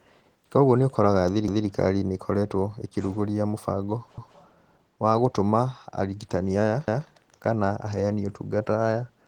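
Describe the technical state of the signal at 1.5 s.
At 1.5 s the signal sits inside a short overlapping-chunks fault running from about 1.48 to 1.68 s. The audio was processed in blocks of about 2.5 s, and the next block began before the previous one had finished, so roughly 200 ms of speech is played a second time at the join. It is heard as a brief stutter, with a small discontinuity where the repeated section butts against the following material.

Underneath that, the whole passage carries Opus voice compression at a level that is plainly audible. The coarseness fits a low rate of about 16 kbps in hybrid mode. Content below 8 kHz goes through the linear-prediction speech coder, and a transform layer handles the band above that, so the output keeps a fullband extent. With so few bits for the excitation, the speech at this point comes out muffled and hoarse, with a faint robotic edge.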